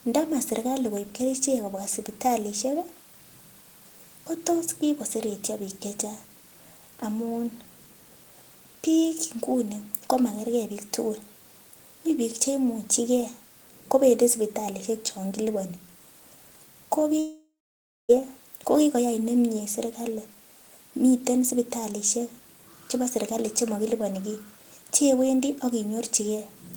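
Speech with a long network dropout from 17.19 to 18.11 s, likely from packets ceasing to arrive. A fading buzz gives way to 0.58 s of silence, and 0.9 s of speech is lost. A spectrogram shows a smeared, decaying band, then a blank gap, and the waveform flattens.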